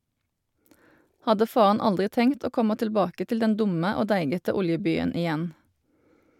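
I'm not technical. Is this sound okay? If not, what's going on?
Yes, this sound is okay, and there's nothing going on with it that needs explaining.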